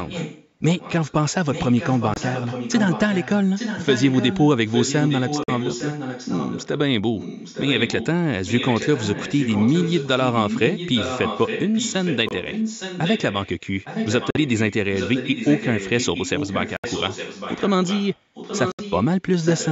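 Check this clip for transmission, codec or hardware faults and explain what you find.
Two faults run through the clip: a persistent delayed echo of the speech and a series of short, hard-edged silences.

The echo leak covers almost the whole recording, at 0 to 1.14 s, 1.52 to 6.68 s, 7.18 to 8.07 s, 8.46 to 13.48 s, 13.84 to 19.06 s and 19.41 s to the end. A fainter copy of the speech trails the original by 863 ms, sitting roughly 10 dB below it. This is likely a loudspeaker on the far end of a call, where the echo canceller failed to suppress what the microphone picked up, so the voice returned on a fixed delay.

The Bluetooth dropouts are brief holes where the sound cuts out abruptly and picks up again further along, as though it kept playing underneath. They occur at 2.14 s (23 ms), 5.44 s (46 ms), 12.29 s (23 ms), 14.31 s (46 ms), 16.77 s (70 ms) and 18.72 s (70 ms). Their lengths fit the loss of one, two or three audio packets that missed their delivery window to the headphones. 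The band stops at 8 kHz, consistent with the call's microphone processing.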